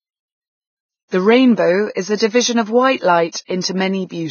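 Vorbis compression runs throughout: nothing is heard above 6.6 kHz and the treble is heavily grainy and hissy, likely from low-bitrate encoding near 13.5 kbps.

Pre-echo at 1.94 to 1.97 s and 3.32 to 3.34 s: quantisation noise spread across each block leaks 27 ms ahead of a sharp attack, adding hiss and smearing the onset.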